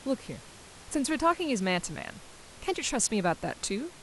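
A speech recording with no technical faults, carrying only the ordinary background noise of the room, which sits about 21 dB below the speech.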